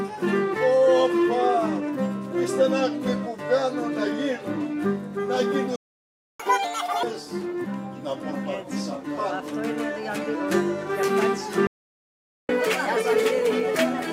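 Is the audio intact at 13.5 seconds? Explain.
No. From 12.49 s to 14.12 s the player is in catch-up at higher speed, resampling its backlog after a stall to recover lost time. At 13.5 s the sound runs 1.25 times fast, with pitch raised about four semitones.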